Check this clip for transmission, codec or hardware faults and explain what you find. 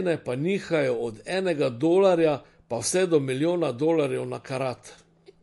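There's one fault, running the whole way through: likely MP3 compression at a low bitrate, around 48 kbps. The speech has a plainly audible watery, swirly texture because the encoder drops weak spectral lines frame by frame, and nothing survives above about 11.3 kHz, where it cut the treble off.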